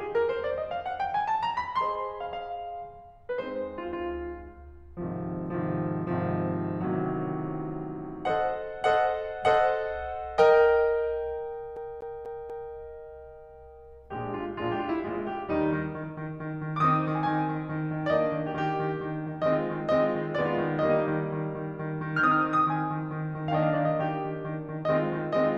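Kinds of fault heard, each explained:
CD stuck on one turn: a scratch on the disc knocks the laser back by one track each time that point comes round. Because of that, one short slice of the music repeats instead of moving forward. Here the loop is about 0.24 s long and plays four times, from 11.76 to 12.74 s. A brief mute falls at each jump, which gives the fast, evenly spaced stutter of a skipping CD before playback continues normally.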